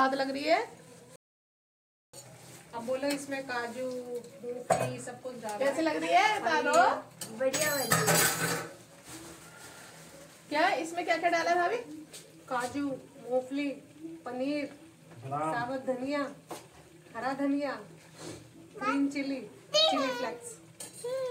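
A playback stall runs from 1.16 s to 2.14 s: the sound cuts off abruptly mid-flow and the output stays silent for nearly a full second, 977 ms. The likely cause is the player running short of data or its thread being blocked until it recovered.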